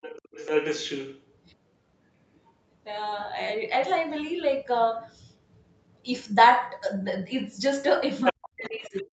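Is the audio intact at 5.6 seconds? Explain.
Yes, the speech at 5.6 seconds is intact, with no fault at that moment.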